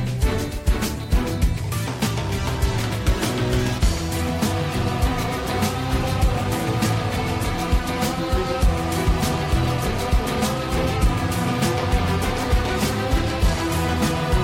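Nothing is technically wrong with this clip; there are no faults to place in time or trace to a cause.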